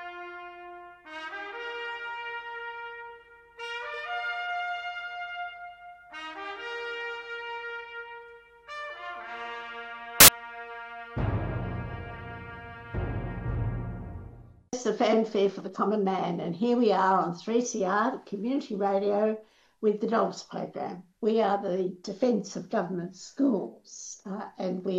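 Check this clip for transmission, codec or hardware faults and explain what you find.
One fault turns up. Samples built from the wrong bytes, 10.20 to 10.28 s: the reader misassembled each sample's bytes, so low bits dominated, producing a brief burst of loud, harsh broadband noise.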